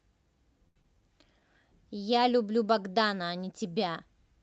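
A short stall from a late packet runs from 0.67 to 0.79 s. The jitter buffer ran dry, so the receiver held the last sound for about 83 ms until the packet turned up, then resumed where it stopped. Nothing is lost, but that sound drags on with a faint buzz or dip.

Short concealed packet loss follows at 0.82 to 0.87 s. About 60 ms of speech never arrived in time. The receiver bridged only 20 ms by extending the preceding sound, so there is a quick smear and a brief jump forward, trimming the delay by roughly 40 ms.

A jitter buffer slow-down spans 0.95 to 1.41 s. To rebuild its reserve, the receiver repeated single pitch periods and slivers of pause, adding 49 ms. The speech plays at 91% speed with unchanged pitch, so syllables stretch slightly and a mild warble can creep in, all within audio band-limited at 8 kHz by the call codec.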